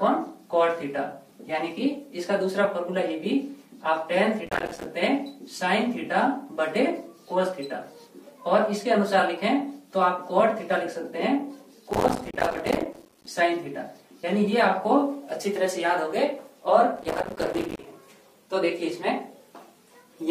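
Processor overload crackle at 4.46–4.85, 11.91–13.27 and 16.96–17.85 s: runs of missed few-millisecond buffers drop to silence, making sustained gritty tearing rather than one isolated dropout.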